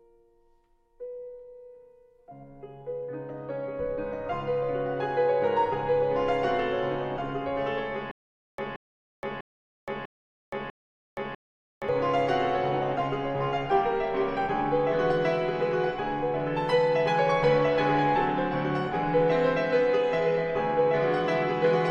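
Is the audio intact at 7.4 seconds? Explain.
Yes, the audio is intact at 7.4 seconds, with no dropout, click, distortion or other fault at that point.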